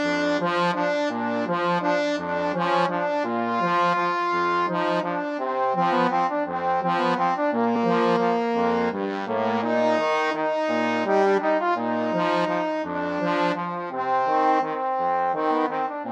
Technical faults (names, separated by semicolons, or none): compressed frames skipped